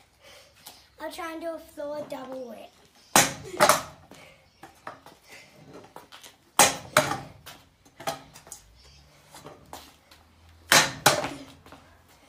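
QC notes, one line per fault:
7.04 to 7.08 s, Bluetooth stutter: there's a short flicker where one slice of sound repeats, about 21 ms of audio played twice, which fits a single lost or late packet. With nothing new coming in, the receiver just replayed its last buffer to fill the gap, then carried on from where the stream actually was, so the sound resumes a touch further along, as if it had kept playing. It's one repeat, so it's a brief hiccup rather than a buzz.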